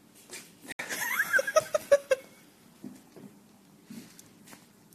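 At 0.72 s the audio drops abruptly into silence until 0.81 s, a corrupt frame muted: damaged compressed frames were rejected and replaced by silence, a gap fitting roughly three codec frames.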